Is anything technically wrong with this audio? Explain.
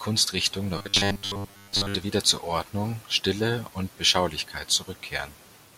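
Yes. From 0.78 to 1.95 s the speech takes on robotic sound from repeated short buffers: the voice becomes a rigid, metallic buzz at 100 Hz that still loosely tracks the words. The likely cause is new audio arriving too seldom, with the playback filling the gaps by looping the last fragment. A 100 Hz buzz fits a block of about 10 ms being repeated, and most of the real audio in that span appears to be skipped.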